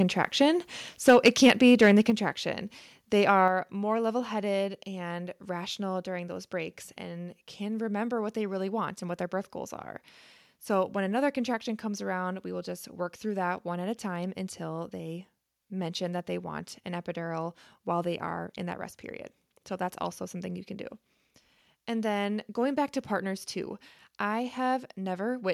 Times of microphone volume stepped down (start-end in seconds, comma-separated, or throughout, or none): 1.10, 2.10, 3.48